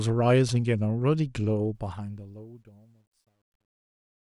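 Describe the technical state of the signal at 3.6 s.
At 3.6 s, the fade-out that runs to the end of the speech at 4.37 s is passing through a gain stage that keeps too few bits and adds no dither. The grain fits roughly an 11-bit word. That is truncation distortion on a fade, present from 1.75 s and worst from 2.71 to 4.37 s. With the level this low, the waveform collapses into a few coarse square steps, so the tail sounds gritty.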